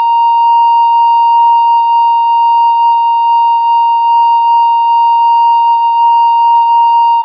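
No technical faults can be heard anywhere in the music; the signal stays continuous and intact throughout.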